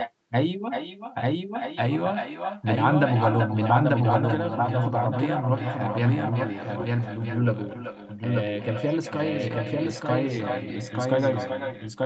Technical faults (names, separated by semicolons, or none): doubled audio track; echo with no canceller